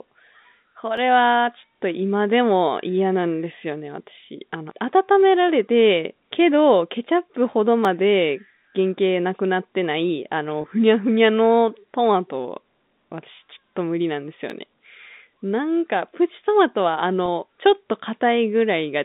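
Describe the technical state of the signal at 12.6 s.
At 12.6 s the speech is intact, carried through the ordinary G.711 telephone coding with its usual narrow line band of roughly 150 Hz to 3.7 kHz and no fault at that moment.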